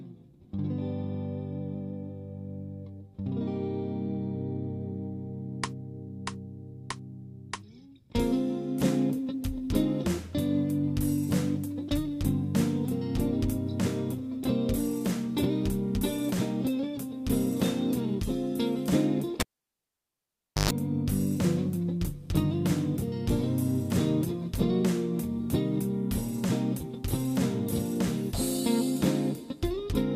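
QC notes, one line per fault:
19.40–20.71 s: cable pulled and plugged in. A pop at 19.40 s marks the live lead being withdrawn, after which the signal drops to near silence for about 1.26 s. As the plug is reseated, the tip touches before the sleeve grounds, so the input picks up a 121 ms burst of 50 Hz mains buzz. A second pop at 20.71 s marks the connection completing and the sound returning.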